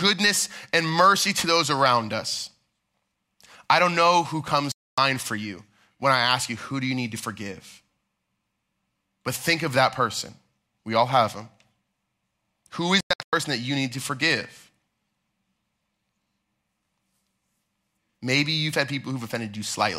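Speech with two digital broadcast dropouts: a clean mute at 4.72–4.98 s, then broken holes across 13.00–13.33 s, where the receiver muted until good frames came back. Both show as flat silent gaps on the waveform and blank vertical bands on a spectrogram.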